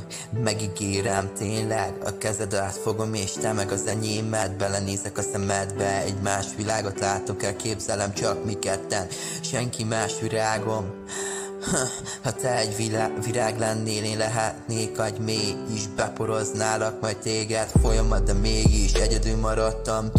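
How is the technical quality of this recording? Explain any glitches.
Listening carefully, nothing in the recording stood out as a technical problem.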